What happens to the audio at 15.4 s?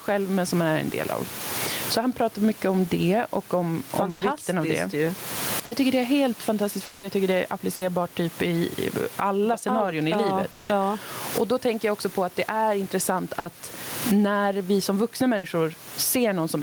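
At 15.37 s, just after "när vi som vuxna", a burst of packet loss interrupts the speech until 15.46 s. For about 60 ms the receiver's concealment carries the last sound forward and fades it down instead of playing real audio. Speech then resumes roughly 60 ms further on than where it broke off, so that stretch of the utterance is simply gone. The result is a brief smeared, dying tail followed by a small jump.

The same moment also carries the gain pumping present across the whole clip. The level is held down on loud speech and lifts again in the pauses, with a swing on the order of 20 dB. The likely cause is input gain set far too high, with a fast limiter or compressor clamping every peak, which also leaves the speech sounding squashed.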